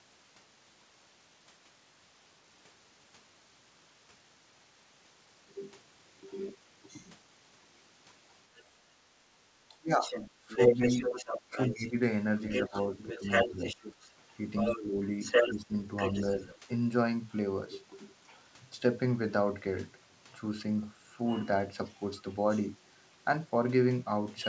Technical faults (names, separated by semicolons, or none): other side's voice leaking through; speech suppressed in double talk